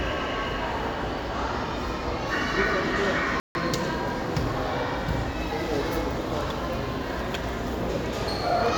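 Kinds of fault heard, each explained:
Bluetooth stall: At 3.40 s the sound cuts to silence for 150 ms, then carries on. A full silent gap rather than a click points to a likely wireless hold-up, with the headphone buffer running dry while delayed packets were resent.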